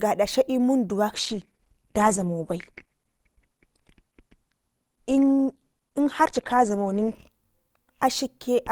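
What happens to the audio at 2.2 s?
At 2.2 s the stream is inside a stretch of adaptive stream at a lower bitrate, running from 1.14 s to 7.14 s. The player switched abruptly to a lower-quality encoding of the same speech and switched back later, with no gap at either transition. Throughout that span the top end is missing, with nothing above about 12.1 kHz, and coding artefacts are more audible. The sound fits a drop from roughly 64 kbit/s Opus to 16 kbit/s.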